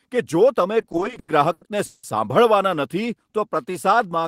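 Repeated stalls (stutter) run from 0.81 to 2.05 s in this speech recording: packets arrived late or slower than playback, so the jitter buffer kept running dry, thirteen times across that stretch. Each time the receiver stretched the last sound to cover the wait, fading it through the longer holes, the longest about 180 ms. Nothing is lost, but roughly 460 ms, about 37% of the span, is filled-in sound, so the speech drags and stutters. A jitter buffer slow-down follows from 3.32 to 4.22 s: with its reserve low or its target delay just raised, the receiver repeated single pitch periods and slices of pauses to rebuild it, adding 84 ms. The speech plays at 92% speed at unchanged pitch, so sounds come out drawn out.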